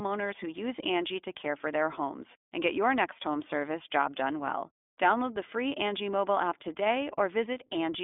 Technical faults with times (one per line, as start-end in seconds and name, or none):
0.00-8.03 iLBC codec